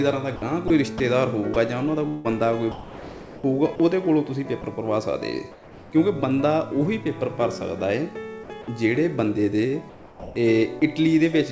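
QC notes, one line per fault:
0.36–1.00 s and 2.08–3.80 s, sound chopped by the voice detector: the sound keeps flicking to flat filler noise, about 0.1 s in total in the first stretch and about 0.9 s in the second. Likely cause: the sender's voice detector toggling transmission on and off.
1.54–1.56 s, 4.62–4.64 s, 8.62–8.68 s and 10.80–10.82 s, sound dropped by the voice detector: short gaps of 10 to 30 ms where sound is lost and replaced by steady noise. The likely cause is quiet sound being judged as background and not sent.
5.52–5.92 s and 9.90–10.82 s, comfort noise in place of the background: the background loses its detail and turns into smooth, even hiss. In the first stretch it sits about 24 dB below the loud parts and drops by about 4 dB. Likely cause: discontinuous transmission, with the receiver filling the pause with synthetic noise.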